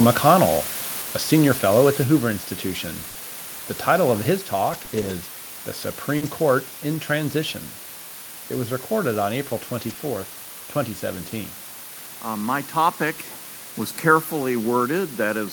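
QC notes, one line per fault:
Throughout: low bit depth with dither. The sound behaves like roughly 6-bit audio with dither added before the rounding, so instead of grainy distortion the quantisation error turns into a steady, even hiss that never changes with the level of the speech. It sits quite high, roughly 10 dB below the signal, so you'll hear it under every word as a constant noise floor rather than anything that comes and goes.
2.04 s: microphone volume stepped down. Right after "senior fellow at the" the whole level drops by about 4 dB in one go, speech and background together. The sudden single step points to the call software deciding the mic input was too hot and turning the device volume down, which is the likely cause. It's a clean step, not a fade.
3.09 to 3.17 s: burst of packet loss. About 60 ms of audio never made it, and the receiver covered the hole with 60 ms of made-up continuation, stretching the last bit of sound and fading it down. 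A voiced sound comes out as a short held buzz, anything else as a hiss that dies away, and then the speech jumps ahead with that stretch simply gone.
4.69 to 5.11 s: repeated packet loss (robotic sound). Across this 0.42 s stretch there are 3 separate gaps, none longer than 20 ms, adding up to 60 ms missing and 60 ms filled, about 14% of the span. Each hole gets patched by extending the last sound, then the next hole arrives soon after, so the speech turns choppy, with little pieces knocked out of it.
6.17 to 6.23 s, 9.93 s and 9.97 s: short concealed packet loss. At 6.17 s, 40 ms went missing, and at 9.93 s and 9.97 s two back-to-back 20 ms holes appear. Each time the decoder carried the previous sound forward, pitched if voiced and as shaped noise if not, then blended back into the real audio. You hear a brief smear or wobble, and a short consonant can vanish inside it.
6.21 to 6.27 s and 9.89 s: lost packet rebuilt from error correction. 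Two packets around 6.21 s (40 ms) and one at 9.89 s (20 ms) were lost, but the following packets carried low-bitrate backup copies, so nothing drops out. Those rebuilt frames are played from the rougher copy, which is why these moments sound grittier and noisier, and in a full-band call the very top end can sag a little because the copy doesn't carry it.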